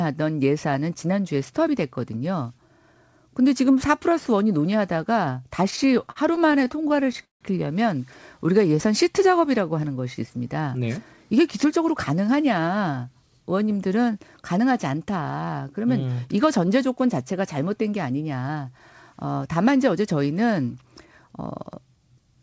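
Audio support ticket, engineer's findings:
Repeated stalls (stutter), 5.64 to 7.43 s. Audio drags and stutters through the whole span, with 25 short hold-ups totalling 426 ms, about a quarter of the span. The longest is 162 ms. Nothing is lost. Component: jitter buffer underrun from late or slow packet delivery. The receiver extends the last sound until data arrives and fades it in the longer gaps. Spectrogram: repeated frozen, smeared harmonic bands, and the longer ones taper off. Waveform: repeated near-identical cycles with decaying envelopes.

Jitter buffer slow-down, 8.39 to 8.77 s. Brief drawn-out stretch at unchanged pitch, playing at 87% speed with 55 ms added. Component: jitter buffer building reserve after running low or raising its target delay. It repeats single pitch periods or pause fragments back to back. Spectrogram: harmonics stretched horizontally, no pitch shift. Waveform: runs of identical periods, possibly a slight warble.

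Jitter buffer speed-up, 10.76 to 11.87 s (107% speed, about 100 ms removed) and 18.41 to 19.26 s (108% speed, about 70 ms removed). Hurried delivery at the same pitch. Component: jitter buffer draining excess delay, as after a burst of late packets. It cuts pitch-period-sized chunks repeatedly. Spectrogram: compressed syllables, harmonics at normal spacing. Waveform: missing cycles at the splice points. The band limit at 8 kHz comes from the call path, which fits wideband G.722.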